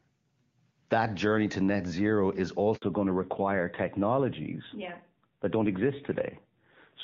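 At 2.76 s the speech cuts to silence for 60 ms, a handover gap: the call switched networks and no speech frames arrived until the new link started. From 2.82 s to the end the speech turns duller and rougher with nothing above 4 kHz, a fallback to narrowband from the clean HD Voice heard earlier to an older narrowband codec.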